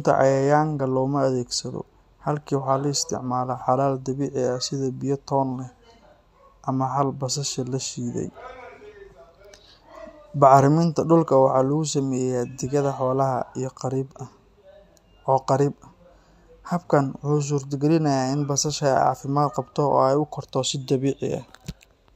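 No technical faults can be heard anywhere in the recording. The speech runs without any disturbance that would need explaining.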